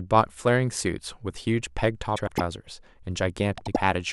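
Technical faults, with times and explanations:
2.17–2.41 s and 3.57–3.77 s, frames out of order: in each stretch two neighbouring blocks, of 104.5 ms and then 78.4 ms, play in swapped order. This gives a garbled flutter. The block sizes fit runs of four and three frames. No time is lost.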